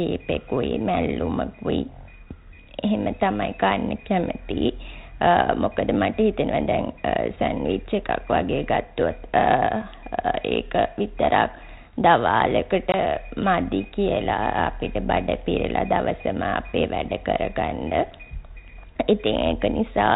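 Packet loss on an ADPCM call hits this speech clip at 12.92 to 12.95 s: a 20 ms hard-edged hole of silence, which fits a single lost packet. Afterwards the decoder's adaptive predictor and step size no longer match the sender's, so the 32 kbit/s G.726 audio resumes briefly slightly distorted before resynchronising.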